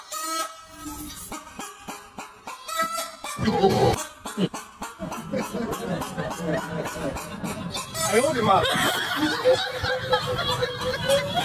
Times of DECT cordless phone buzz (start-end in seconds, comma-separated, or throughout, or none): none